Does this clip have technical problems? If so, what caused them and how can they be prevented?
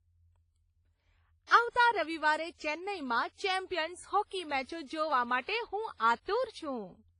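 Yes. Throughout the speech there is heavy coding damage, most likely from WMA compression. Nothing is heard above about 10.4 kHz. The sound rings and smears, and a hiss rises and falls with the speech. This points to a transform codec working with long blocks. Its quantisation noise spreads over tens of milliseconds around each sound. Weak spectral lines are dropped, which fits a low bitrate near 24 kbps. To prevent this, encode at a higher bitrate or with a modern codec.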